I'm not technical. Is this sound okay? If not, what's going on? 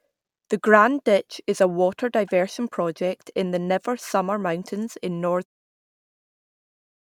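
Yes, the speech comes through with no technical problems, and the gentle fade-out around five and a half seconds is a deliberate smooth fade, not a fault.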